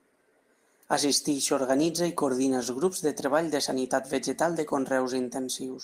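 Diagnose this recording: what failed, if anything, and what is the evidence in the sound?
Clock drift between sender and receiver, present throughout the speech: the sender's clock runs slow by roughly one and a half percent, so the receiver's jitter buffer keeps draining. This is a network-side buffering fault, audible as recurring small hiccups at uneven intervals.

Repeated timing corrections, from 0.30 to 5.67 s: to refill the starving buffer, the receiver repeatedly duplicates short pieces, all in the same direction and unevenly spaced. Together they stretch the passage to 98% speed, adding about a tenth of a second.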